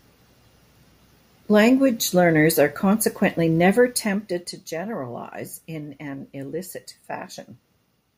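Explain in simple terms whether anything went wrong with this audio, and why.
Something went wrong between 3.72 and 4.59 seconds, right after "learners are consequently" and before "generalize in an illicit". The volume drops in about 100 tiny steps per second instead of gliding. Each step clicks, causing a buzzy ticking called zipper noise.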